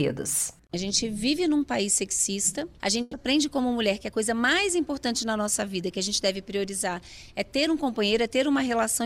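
A burst of packet loss interrupts the audio between 3.01 and 3.15 s. Around 120 ms of consecutive packets either never arrived or arrived too late for playback. The receiver covered the gap by extending the last received sound and fading it down, so there's no silence, only a smeared tail. When the stream resumes, the 120 ms of material that should have been there is simply missing.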